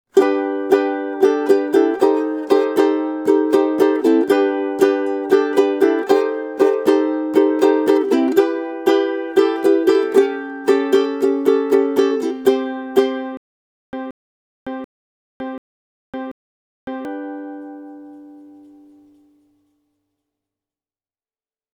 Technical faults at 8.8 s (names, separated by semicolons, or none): none